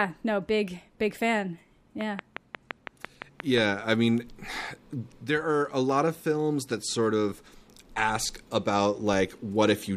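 Something in the chain, likely interference from nearby equipment or a faulty connection or power supply, injects a steady run of pulses from 2.01 to 3.59 s, just after "no big big fan" and ending before "I mean". This train of clicks arrives at a regular 5.7 per second, about ten clicks of much the same shape, peaking about 15 dB above the speech. It is heard as an even ticking laid over the talking and into any gaps between phrases.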